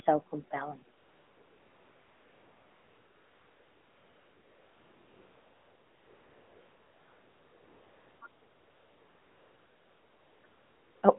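This speech clip has three stretches of AMR comfort noise, from 0.98 to 8.22 s, 8.28 to 10.44 s, and 10.46 to 11.02 s. The phone judged the talker silent and stopped sending speech frames. The receiver then filled these gaps, 7.24 s, 2.16 s and 0.56 s long, with a steady, smooth synthetic hiss that switches in and out. The audio is band-limited to roughly 250 Hz to 3.5 kHz, consistent with AMR narrowband coding.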